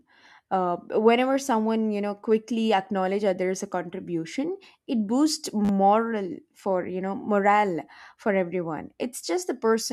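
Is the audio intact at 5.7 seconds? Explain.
No, there's a repeated buffer from 5.65 to 5.69 s: a roughly 10 ms chunk replays four times when new audio arrives late, producing a brief buzzy stutter.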